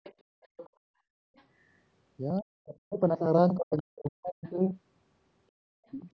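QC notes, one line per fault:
0.04 to 4.51 s, other side's voice leaking through: the echo canceller likely left part of the loudspeaker signal in the microphone path, so brief faint scraps of a second voice sit under the talker at 0.04, 0.42 to 0.69, 1.36, 3.77 and 4.44 s. They are roughly 20 to 35 dB below the main speech, and loudest around 0.5 s.
2.40 to 2.98 s and 3.57 to 4.46 s, speech suppressed in double talk: with both sides talking at once, the canceller likely could not tell the talker from the echo and turned both down. The talker's voice dips by as much as about 40 dB.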